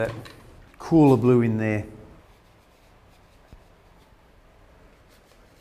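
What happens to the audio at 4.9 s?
Nothing goes wrong at 4.9 s; the audio plays through that moment intact, with no dropout, click, glitch or other fault.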